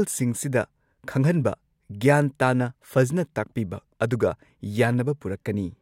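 No dropouts, clicks, distortion or level jumps turn up anywhere in the recording.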